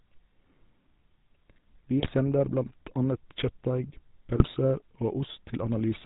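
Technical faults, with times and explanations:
throughout: GSM full-rate codec. The whole speech clip has passed through the 13 kbps GSM full-rate coder, and the damage is plainly audible. The coder rebuilds the voice from a vocal-tract filter excited by a sparse pulse train that keeps only one excitation sample in three, which gives the gravelly, buzzy grain heard on every voiced sound. Nothing above 4 kHz survives, so the speech sounds dull and boxed-in, with sibilants blunted.
2.0–2.11 s and 4.36–4.53 s: GSM bit errors. Both bursts break the speech into brief squawks and gargling. The first falls just before "sender blant" and spans a handful of frames, as if around 2% of bits were corrupted. The second is longer and comes from a similar error density. Corrupted filter, pitch or gain parameters make the decoder synthesise a wrong spectrum or level for each hit frame, hence the abrupt, unnatural bursts.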